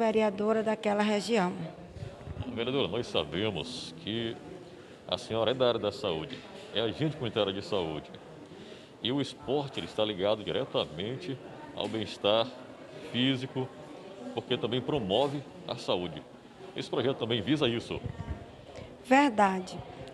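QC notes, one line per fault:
No faults found on this pass; nothing to flag.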